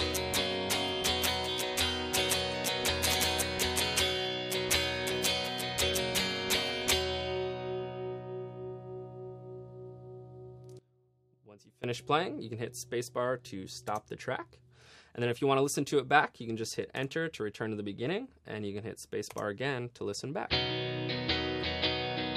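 From 10.79 to 11.84 s the sound drops about 19 dB, likely one channel inverted cancelling in the mono sum; unlike a dropout, a quieter residue remains audible.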